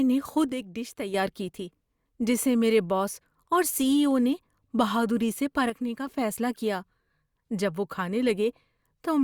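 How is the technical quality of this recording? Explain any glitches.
Two short glitches affect this speech recording, both a level dip most likely from one channel dropping out. From 0.49 to 1.14 s and again from 5.70 to 6.07 s, one stereo side goes silent. Once the channels are summed to mono, the sound falls abruptly by about 6 dB, then jumps back.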